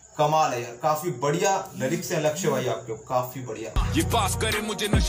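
Nothing in the audio stood out as a technical problem on listening.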